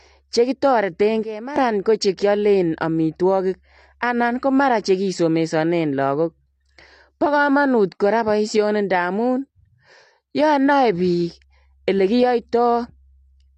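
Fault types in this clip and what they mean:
AAC compression: The speech sounds dull and smeared throughout, with plainly audible warbling and fizz on sustained sounds and sibilants and nothing above 9.5 kHz. This is likely low-bitrate AAC-LC coding, consistent with roughly 32 kbps, which discards high bands and coarsely quantises the rest.
Sudden gain jump: From 1.23 to 1.56 s the speech and background noise drop abruptly together by about 12 dB, then snap back. This is likely a digital gain change applied instantly between samples, with no ramp to smooth the transition.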